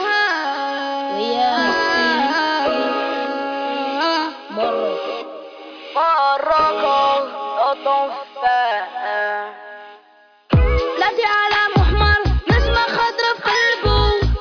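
No technical faults are audible.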